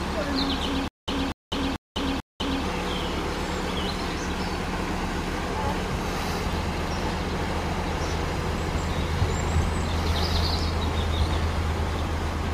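From 0.88 to 2.64 s there is stutter with silent gaps. A 241 ms burst repeats four times, each followed by 200 ms of silence. A stalled stream likely caused it.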